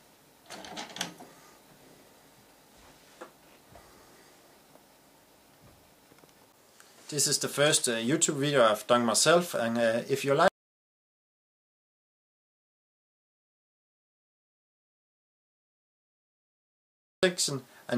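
From 10.48 to 17.23 s an audio dropout to silence leaves silence, without the room tone a pause would keep, likely from lost input.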